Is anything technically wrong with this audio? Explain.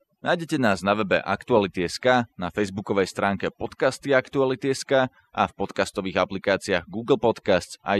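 Yes. Throughout, overdone noise removal: the denoiser cuts bands near its noise estimate, taking quiet speech detail too, leaving speech over twinkling near-silence rather than smooth low-bitrate smearing.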